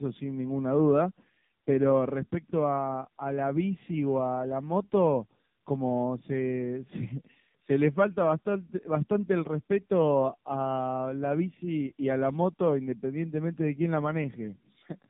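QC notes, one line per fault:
throughout, tandem speech coding: the speech goes through AMR-NB at 12.2 kbit/s, out to G.711 mu-law, then back into AMR-NB at 6.7 kbit/s. The second coder re-compresses already damaged speech, so it comes out gritty, dull and wobbly, with nothing above 3.6 kHz.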